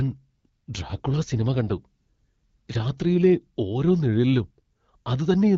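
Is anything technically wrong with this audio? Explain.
Yes, there's an AMR rate drop from about 0.75 to 3.32 s, ending just before "ഓരോ നിഴലിലും". The link pushes the AMR-WB coder from 12.65 down to 8.85 kbit/s, spending bits on protection, so the speech gets rougher and more synthetic with no gap or band change.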